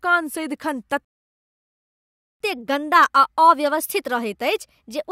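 At 1.05 s the speech cuts to silence for about 1.36 s, a playback stall. The player likely ran dry or was blocked. From 2.40 s to the end, catch-up at higher speed plays the backlog at 1.1 times normal rate, raising pitch by about one and a half semitones. Pitch and tempo rise together, which separates it from a pitch-only shift.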